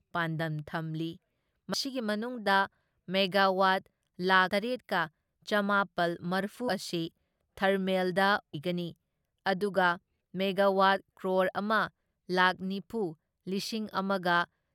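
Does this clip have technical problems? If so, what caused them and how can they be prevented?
Yes: this speech has compressed frames skipped, at 1.73, 4.48, 6.68 and 8.53 s. Each time the talk jumps forward, by around a tenth of a second at 1.73 and 6.68 s and by about 150 ms at 4.48 and 8.53 s. The jump sizes fit whole blocks of roughly 21 ms. Those blocks were either missing from the file or rejected by the decoder as damaged. To prevent it, check the file's integrity after transfer and use a transport with error correction or retransmission, so that no compressed frames are lost or corrupted.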